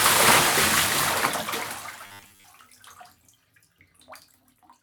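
A recording of sounds that turns robotic from 2.06 to 2.44 s. The texture collapses into a rigid, metallic buzz at 100 Hz while the overall shape of the sound still roughly comes through. This is robotic sound from repeated short buffers, likely caused by audio arriving too seldom so that a 10 ms slice is replayed over and over, filling most of that stretch. Unlike a stutter or dropout, there are no audible gaps, only a fixed-pitch drone.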